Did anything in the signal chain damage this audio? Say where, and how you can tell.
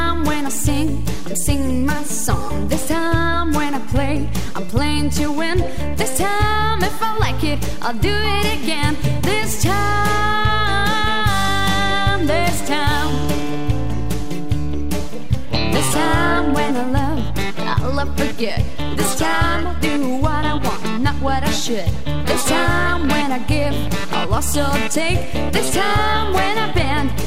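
Yes. A DC offset runs through the whole clip, sitting at about -19 dBFS. The converter or analogue input stage is adding a constant voltage, pushing the waveform off centre. It is inaudible but shows as steady energy at 0 Hz and eats headroom.

A train of clicks runs from 12.33 to 13.55 s: around seven similar pulses at an irregular 4.14 per second, peaking roughly level with the signal. This is likely interference from nearby equipment or a faulty connection or power supply, injecting repeated ticks over the sound.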